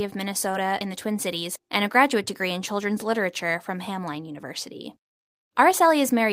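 At 0.51 to 0.55 s, just before "in the", there is a short concealed packet loss. A gap of about 20 ms never arrived in time to be decoded, so the receiver synthesised roughly 16 ms of substitute audio by extending the preceding sound and then cross-faded back into the real signal. It is heard as a brief smear or wobble where the speech should be crisp.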